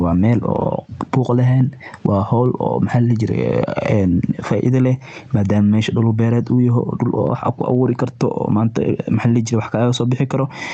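Speech here, and gain pumping runs through the whole clip, with the gain swinging by roughly 15 dB. That's likely input gain set far too high, with a fast limiter clamping it down, and it comes through a call codec whose top end stops around 8 kHz.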